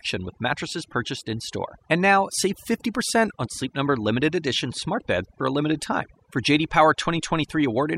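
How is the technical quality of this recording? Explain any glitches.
The recording is compromised by one fault lasting the whole clip: overdone noise removal. Frequency bands near the estimated noise are cut out, taking quiet speech detail along, so pauses fall to near silence with twinkling specks, unlike codec artefacts, which persist through steady background noise.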